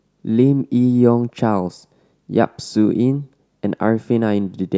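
No technical faults can be heard anywhere in it.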